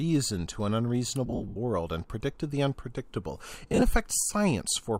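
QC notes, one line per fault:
1.26–1.57 s and 3.68–3.82 s, lost LE Audio frames: brief noisy smears with tones dissolving into hiss. The decoder filled scattered gaps, each lasting up to about 70 ms, with the last spectrum under random signs.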